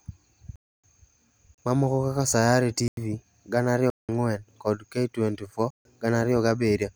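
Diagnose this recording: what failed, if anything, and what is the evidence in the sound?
The audio driver or buffer stage repeatedly failed to deliver samples in time, so whole blocks of this speech were output as digital silence. The sound drops out abruptly at 0.56–0.84 s (about 279 ms), 1.54–1.58 s (35 ms), 2.88–2.97 s (93 ms), 3.90–4.09 s (186 ms) and 5.70–5.85 s (148 ms). The 93 and 186 ms holes fit lost 4096- and 8192-sample buffers.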